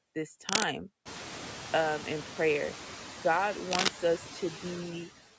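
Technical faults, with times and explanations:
Throughout: noise suppressor artifacts. The suppressor pulls steady-noise bands down only about 2 dB, frame by frame, so the background noise dips and swells around the speech.
0.49–0.64 s and 3.71–3.88 s: cable scratch noise. Short rough bursts, roughly 5 dB above the speech, with likely cause a worn cable or connector shifting contact resistance.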